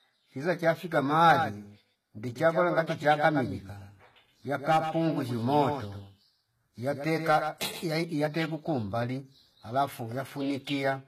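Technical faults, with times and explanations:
throughout: HE-AAC compression, likely at a low bitrate around 20 kbps. The treble is rebuilt from copied lower bands, so sibilants sound gritty, nothing above 14.9 kHz.
1.29 to 7.85 s: doubled audio track, likely a second out-of-step copy about a tenth of a second behind and roughly 10 dB down, starting and stopping abruptly with no decay.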